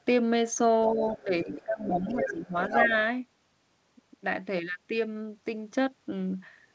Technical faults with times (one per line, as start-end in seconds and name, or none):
0.88-2.54 speech suppressed in double talk
1.08-1.64 other side's voice leaking through
2.08-2.31 other side's voice leaking through
2.65-2.90 other side's voice leaking through
2.86-2.93 speech suppressed in double talk